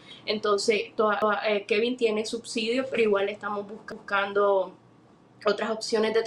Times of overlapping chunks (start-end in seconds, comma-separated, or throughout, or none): 1.22-1.42, 3.92-4.12